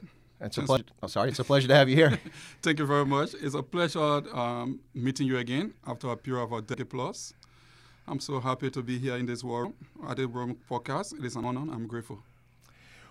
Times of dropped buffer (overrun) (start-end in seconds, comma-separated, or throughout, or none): 0.77, 6.74, 9.64, 11.43